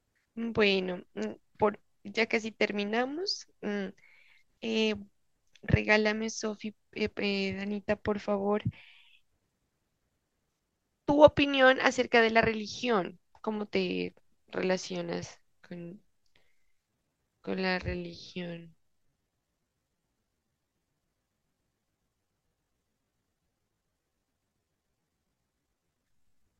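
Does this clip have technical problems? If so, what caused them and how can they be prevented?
Yes. From 15.83 s to the end, the speech falls into a time-stretched section, likely caused by software lengthening the audio to fill a set duration, running it at about 0.71 times its original pace while holding pitch by repeating short slices. The pace drops suddenly at that point with no change in pitch, and the remaining speech drags. To prevent it, trim or edit the audio to the needed length instead of stretching it to fit.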